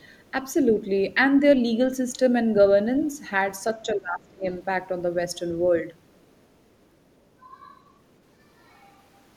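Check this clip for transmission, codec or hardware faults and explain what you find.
Two faults show up in this speech clip, both tied to echo cancellation on the talker's end.

Other side's voice leaking through, at 0.00 to 0.31 s, 6.10 to 6.46 s and 6.81 to 6.86 s: faint scraps of a second voice sit far beneath the main speech, roughly 40 dB down. They are brief. This is likely residual loudspeaker echo. The far end's audio reached the microphone, and the canceller did not fully subtract it.

Speech suppressed in double talk, at 3.86 to 4.44 s: the talker's speech sags sharply, dropping by around 20 dB at its deepest, for about half a second in total. The speech sounds pushed back and partly cut away. The likely cause is that both sides spoke at once. The echo canceller could not separate the near voice from the echo and attenuated everything together.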